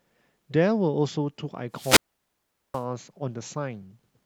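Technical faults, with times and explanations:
1.72–2.85 s wireless microphone squelch dropout: fading radio signal lets hiss rise, then the receiver mutes for 0.78 s, a flat, near-empty band on the spectrogram.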